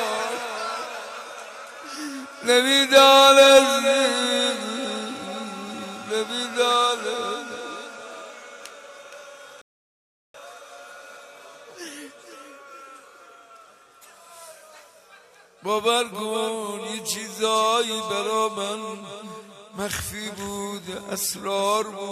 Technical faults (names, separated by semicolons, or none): rebuffering stall